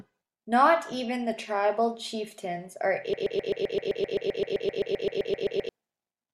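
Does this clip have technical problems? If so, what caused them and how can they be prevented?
Yes. From 3.13 s to 5.69 s the speech sticks in a broken-record loop, with one 130 ms fragment repeating back to back 20 times while the intended speech is lost. A stalled player or stream likely kept resending its last fragment. Detecting stalls and muting rather than replaying prevents this.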